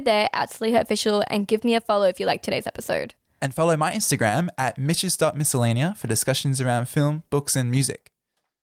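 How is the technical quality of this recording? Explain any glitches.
Listening closely, nothing in the recording stood out as a technical problem or glitch.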